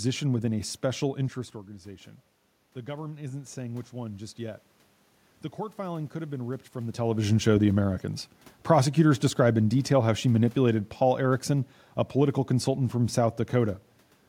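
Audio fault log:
2.73–4.66 s, automatic gain rising: after "a special interest organization" the input level drops by about 13 dB, and the gain control slowly lifts its gain by about 4 dB over nearly two seconds, so the voice and the room noise swell up together.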